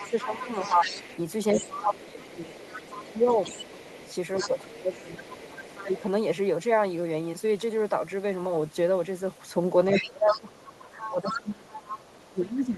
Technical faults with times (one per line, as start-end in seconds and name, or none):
0.00-6.00 other side's voice leaking through
0.03-0.84 speech suppressed in double talk
1.54-3.26 speech suppressed in double talk
3.84-6.04 speech suppressed in double talk
9.92-12.31 other side's voice leaking through
10.00-12.77 speech suppressed in double talk